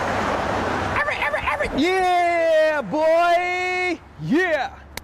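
Nothing in the signal points to a technical fault; the sound continues without interruption and shows no sign of damage from the recording or playback chain.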